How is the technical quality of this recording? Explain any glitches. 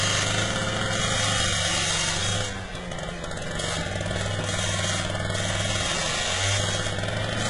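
The quality is poor throughout. Likely HE-AAC compression runs the whole clip: the treble is copied up from lower bands, sounding metallic and gritty with nothing above 11.1 kHz, which fits a very low bitrate of around 12 kbps.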